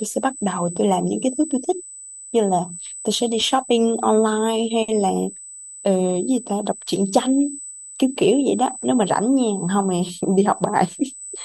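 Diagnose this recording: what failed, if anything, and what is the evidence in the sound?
What's failed here is the analogue side: there's USB whine riding under the speech for the whole clip, a steady fixed-pitch tone at 8 kHz, sitting only around 15 dB below the voice. That pitch is the giveaway. A high-speed USB bus pulls current in 125-microsecond microframes, and that 8 kHz ripple is leaking into the audio through shared power or ground wiring.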